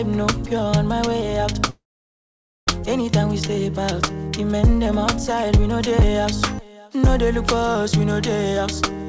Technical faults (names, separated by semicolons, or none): long network dropout